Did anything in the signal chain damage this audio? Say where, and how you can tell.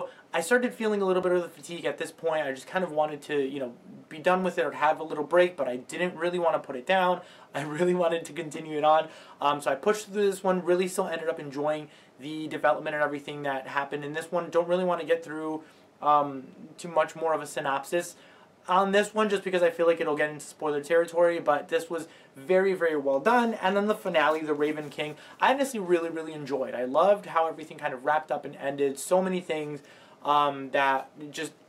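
No, nothing along the chain has left an audible mark on this recording. Listening through it, there are no dropouts, glitches, distortion or other artefacts that would point to a failing stage.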